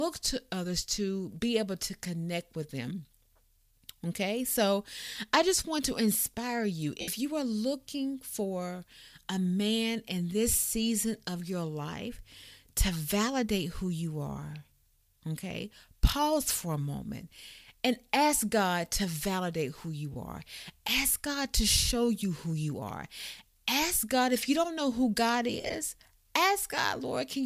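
Lost LE Audio frames at 7.01–7.08 s, 20.12–20.16 s and 25.60–25.74 s: the decoder, likely LC3 with 7.5 ms frames, filled each gap by reusing the last spectrum with scrambled signs, so the speech briefly smears into noise. The final loss is scattered, with its longest stretch about 40 ms.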